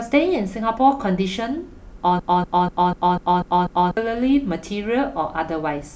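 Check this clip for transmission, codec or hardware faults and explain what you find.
There's one fault here, a broken-record loop. From 2.19 to 3.97 s, a 0.25 s fragment of speech repeats seven times back to back, likely from a stalled player or stream resending its last buffer, and the speech that belonged there is gone.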